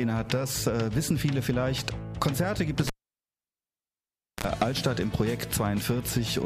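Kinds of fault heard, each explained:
Cable pulled and plugged in: a live lead is yanked and reinserted, so at 2.87 s a pop drops into about 1.5 s of near silence, then a 40 ms burst of 60 Hz mains buzz and a second pop at 4.44 s; waveform shows spikes bracketing a flat gap, spectrogram a brief harmonic comb.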